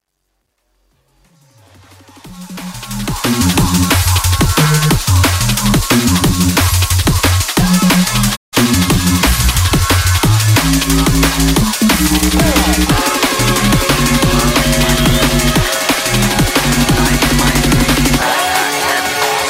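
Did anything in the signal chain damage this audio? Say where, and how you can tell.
Yes. A gain stage applying the opening fade-in requantised the signal without dither, at a resolution that fits roughly 11 bits. From 0.0 to 3.46 s the quiet start is gritty, and it is worst from 0.0 to 1.93 s, where the lowest levels collapse into a few coarse steps. Only its low end carries this truncation distortion on the fade.

At 8.35 s a digital broadcast dropout occurs in reception or transport. The decoder lost valid frames and muted until good ones returned at 8.55 s. The sound ramps down over about 20 ms, sits in a hole of about 160 ms, then ramps back up. That span fits roughly five lost frames. Whatever was sent during that gap is missing outright rather than distorted.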